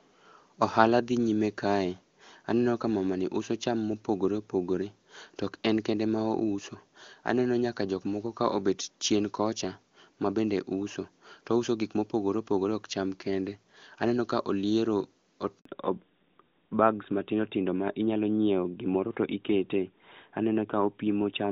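At 15.59 s the speech cuts out in a handover gap lasting 60 ms, until 15.65 s, as the call switches networks and no speech frames arrive. The waveform drops to a flat line and the spectrogram shows a narrow blank vertical stripe across all frequencies.

From 15.65 s to the end, a fallback to narrowband takes over. The voice loses its crisp top and sounds duller and rougher than the clear HD Voice before it, which fits a move from AMR-WB at 23.85 kbit/s to AMR-NB at 12.2 kbit/s. On a spectrogram, energy stops sharply at 4 kHz, leaving the band above empty.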